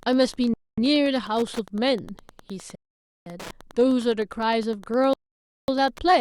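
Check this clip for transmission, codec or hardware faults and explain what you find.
Two problems here: a ticking Wi-Fi interference buzz under the whole speech clip, and three Bluetooth stalls where the sound drops out completely.

The Wi-Fi interference runs from start to finish, a steady tick repeating every 102.4 ms, so roughly ten a second, sitting well below the speech. A nearby Wi-Fi radio's beacon is getting into the audio circuit and being rectified into these clicks.

The Bluetooth stalls hit at 0.54 to 0.78 s, 2.75 to 3.26 s and 5.13 to 5.68 s, giving silences of 241, 509 and 547 ms before the speech carries on. Likely cause: interference delayed packets, the headphone buffer emptied, and playback waited for resends.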